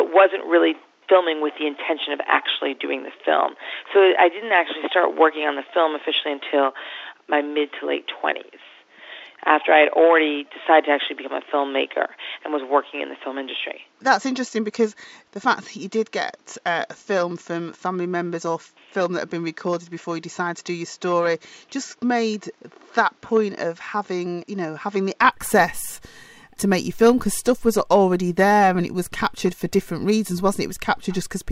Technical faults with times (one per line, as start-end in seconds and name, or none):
0.00-25.22 input switched to a poorer device